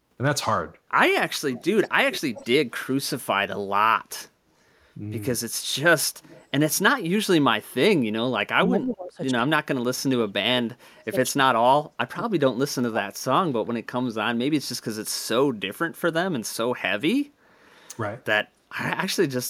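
Speech recording with two far-end echo problems. An echo leak appears at 1.31–1.64, 1.83–1.89, 2.1–2.46 and 6.23–6.46 s: a faint copy about 200 ms late, roughly 15 to 25 dB down, likely residual loudspeaker echo. Speech suppressed in double talk follows at 8.51–9.2 and 9.45–13.07 s, dipping about 25 dB then up to 40 dB, likely the echo canceller attenuating overlapping talk.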